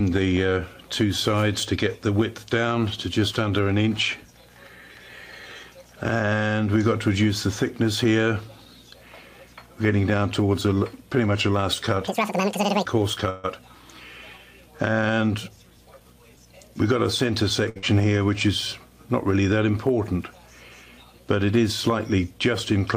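From 12.08 to 12.85 s a section plays at the wrong speed, twice as fast, with pitch jumping roughly ten semitones. This likely comes from a wrong-clock playback or edit. On a spectrogram the harmonics shift abruptly upward and their spacing widens for that stretch. At 13.30 to 13.46 s a call audio freeze holds the last sound as it fades for 139 ms, likely because delayed packets left the jitter buffer empty. Playback then resumes where it stopped, so nothing is lost but everything after is 139 ms later. The spectrogram shows a smeared, frozen band of energy rather than silence. From 15.34 to 16.64 s a jitter buffer speed-up runs the audio at 111% while keeping pitch. Around 150 ms is trimmed out in many small pitch-period cuts, so the passage sounds hurried. The waveform shows compressed timing with slight discontinuities at the splice points. At 17.69 s a short stall from a late packet stretches the preceding sound for 63 ms, heard as a brief held sound. 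It appears as a repeated, flattened cycle pattern in the waveform. Directly after, at 17.78 s, a burst of packet loss fills 50 ms with a decaying continuation of the last sound and drops 60 ms of audio. The spectrogram shows fading energy followed by a jump where the missing material should be.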